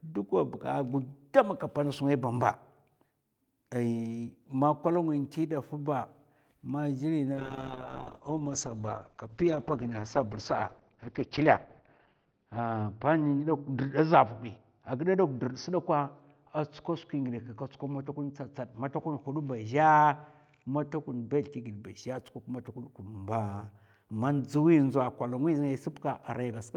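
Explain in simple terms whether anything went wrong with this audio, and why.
A call bitrate drop hit after "ma gli", from 7.35 to 21.89 s: the connection seemed to weaken, so the speech was squeezed into far less data. It turns rough and muffled, losing everything above 6 kHz, and is at its worst for about 4.5 seconds.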